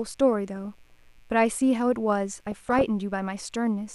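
Interference from switching spikes in the mains supply, twice per 60 Hz cycle, has leaked into this speech recording, producing mains buzz: a steady, raspy drone rich in 60 Hz harmonics reaching into the kilohertz range, sitting roughly 40 dB below the speech throughout. Weak DAB reception let bit errors, a small fraction of a percent, slip past error correction into the MP2 data, causing DAB burbling from 0.56 to 0.92 s and from 2.34 to 2.82 s. Wrong samples put short blips of noise into individual sub-bands across around twenty frames each time, giving burbling noise over the speech.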